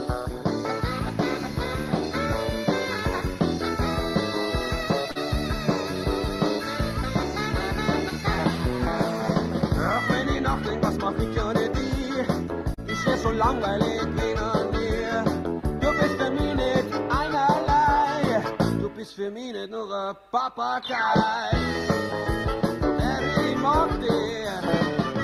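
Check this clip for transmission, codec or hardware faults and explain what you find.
Two brief transmission faults are present, both short stalls from a late packet. At 5.11 to 5.17 s and 12.74 to 12.79 s, a packet arrived late and the jitter buffer ran dry. The receiver held the last sound for about 40 ms and 34 ms, then resumed without losing anything, leaving a slightly drawn-out moment with a faint buzz or dip.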